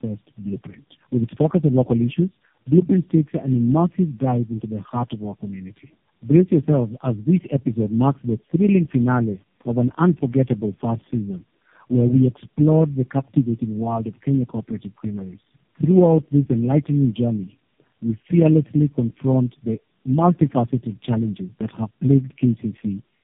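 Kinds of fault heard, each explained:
Tandem speech coding: the speech passes through three low-rate speech codecs in a row, a G.729A-type coder twice and an AMR-NB coder at about 5.9 kbit/s at the end, with G.711 links between them, so each coder re-encodes the previous one's errors. The voice sounds rough, muffled and warbly throughout. On a spectrogram, nothing shows above 3.7 kHz, harmonics look smeared and blotchy, and formant bands waver from frame to frame.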